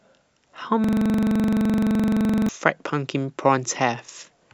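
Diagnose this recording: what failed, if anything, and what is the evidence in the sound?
The audio hits a system hang loop from 0.84 s to 2.49 s, a driver or buffer failure. The speech freezes into one 42.67 ms fragment that repeats exactly, around 39 times, so you get a fast mechanical rattle at about 23.4 Hz instead of words. That's the driver or host locking up while the sound hardware keeps replaying the same ring buffer. The loop length fits a 2048-sample buffer.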